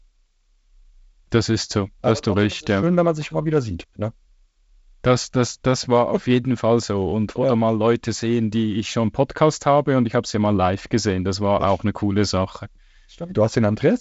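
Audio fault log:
No fault to log for this speech clip.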